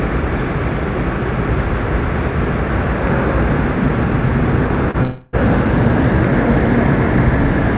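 At 4.91 to 4.97 s there is short concealed packet loss. About 30 ms of audio arrived too late. The receiver bridged it by extending the preceding sound, leaving a brief smear.

From 5.03 to 5.36 s comes a long network dropout, likely the cause. About 0.3 s went missing. A fading, continued buzz or hiss covers the gap before the sound resumes further on. The band stops at 4 kHz, which fits a G.711 call codec.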